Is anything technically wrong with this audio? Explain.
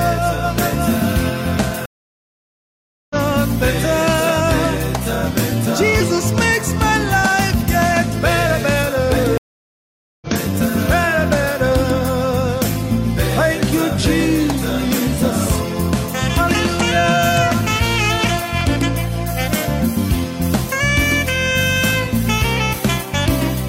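Yes, there are two stream reconnects, at 1.86 to 3.16 s and 9.38 to 10.27 s. Each time the connection breaks and a fresh decoder restarts mid-stream, so after about 1.2 s and 0.8 s of silence the audio resumes roughly a second and half a second later. Unlike a plain dropout, it skips ahead instead of continuing where it stopped.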